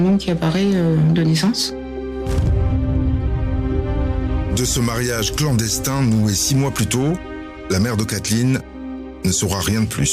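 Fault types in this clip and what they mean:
Hard clipping: the signal was driven about 4 dB past what one stage could pass, so its peaks were cut flat throughout. Roughly one sample in twenty-five sits on that ceiling, and the flattened tops add high harmonics heard as crackle and grit on the louder moments.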